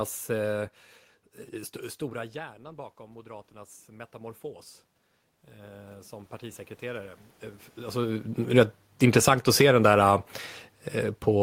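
Speech, with the automatic gain control repeatedly readjusting. In automatic gain rising, the control answers a quiet input, after the talker moves away around 2 s and 7.5 s, by lifting gain about 7 dB over 1.99 to 4.48 s and about 5 dB over 5.52 to 8.39 s and 9.49 to 10.35 s, so voice and room noise swell together. In automatic gain falling, the control finds the input too loud and cuts gain about 6 dB between 8.42 and 9.87 s, letting the sound and its background sink together.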